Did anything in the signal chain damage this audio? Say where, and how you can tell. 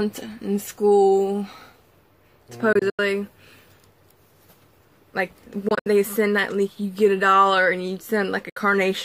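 Yes, playback over a wireless link, likely Bluetooth dropout: abrupt holes at 2.73–2.99, 5.68–5.86 and 8.49–8.57 s, where late packets were discarded, and the sound resumes further along.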